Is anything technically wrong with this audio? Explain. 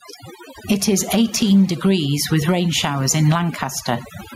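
Yes, there are two problems, and both run through the whole clip.

Overdone noise removal: a noise reducer was pushed too hard, so any frequency band near its noise estimate gets cut way down. Quiet parts of the speech go with it, leaving a reduced background that breaks up into twinkly specks.

Gain pumping: the level swings by about 15 dB as it clamps down on loud speech, so everything sounds squashed and flattened in level. The likely cause is the mic gain set far too high, with a fast limiter or compressor clamping down on every loud sound.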